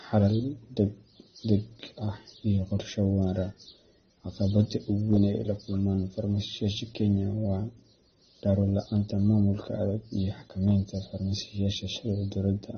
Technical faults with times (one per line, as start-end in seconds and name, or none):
0.00-12.78 transcoding between lossy codecs